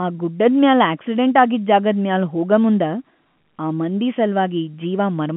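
No technical faults can be heard in this speech recording. It carries the narrow band of G.711 telephone coding, with the sound confined to roughly 150 Hz to 3.4 kHz, nothing present above 3.8 kHz, and at most a faint trace of the codec's level-following noise.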